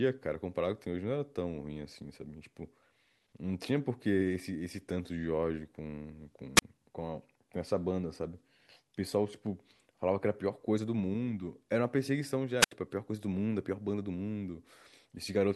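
At 6.56 s a short swell of hiss gives way to a near-silent gap of about 31 ms before the speech returns at 6.62 s; a longer one follows from 12.60 to 12.71 s, the hole lasting about 74 ms. Both are wireless microphone squelch dropouts: the FM radio link weakened, its rising noise broke through, and the receiver's squelch cut the output until the signal recovered.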